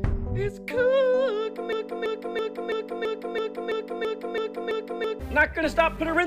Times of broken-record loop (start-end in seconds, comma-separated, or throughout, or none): 1.73-5.20